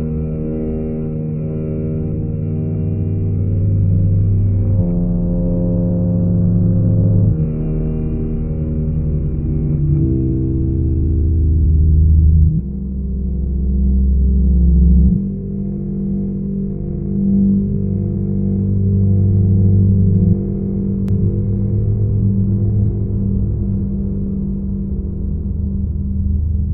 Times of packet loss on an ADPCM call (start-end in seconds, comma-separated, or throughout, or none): none